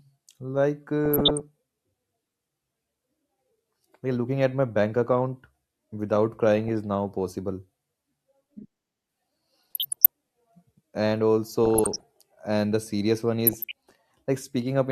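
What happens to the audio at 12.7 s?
Nothing goes wrong at 12.7 s; the speech carries on intact through that moment.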